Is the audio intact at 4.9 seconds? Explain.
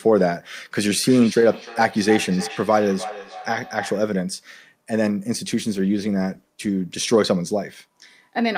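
Yes, the speech at 4.9 seconds plays through cleanly, with no dropout, click, distortion or other fault audible at that moment.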